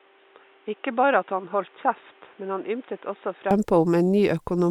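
Input switched to a poorer device, likely, from the start to 3.51 s: the speech arrives through a narrow path with nothing above 3.8 kHz, so it sounds dull and boxy, noticeably quieter, and sits over a faint background noise some 30 dB down. At 3.51 s the full bandwidth and level return with no gap, which is what a recording input handing over from a headset-type microphone to a better one sounds like.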